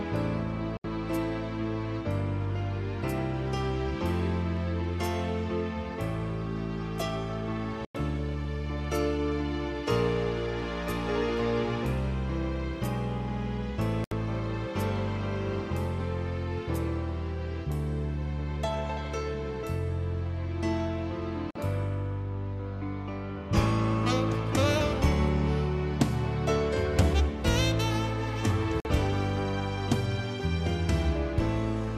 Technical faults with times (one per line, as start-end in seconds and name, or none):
0.77-0.85 digital broadcast dropout
4.57 dropped samples
7.85-7.95 digital broadcast dropout
14.04-14.12 digital broadcast dropout
21.51-21.56 digital broadcast dropout
28.80-28.86 digital broadcast dropout